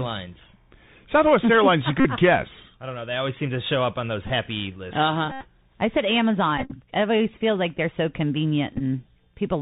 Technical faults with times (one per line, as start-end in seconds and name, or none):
0.00-9.61 Bluetooth CVSD headset codec
2.00-2.05 Bluetooth headset packet repeated
4.27-4.30 Bluetooth headset packet repeated
5.32-5.47 Bluetooth headset packet repeated
6.58-6.73 Bluetooth headset packet repeated
8.74-8.81 Bluetooth headset packet repeated